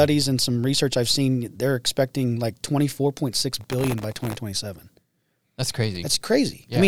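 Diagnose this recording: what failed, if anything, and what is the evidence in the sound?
Processor overload crackle at the driver or buffer stage, from 3.51 to 4.35 s: a gritty burst of crackle rides on the speech, then stops. Each buffer that misses its deadline replays stale audio with hard edges. The density suggests very short, sub-millisecond buffers, with roughly a hundred misses in that stretch.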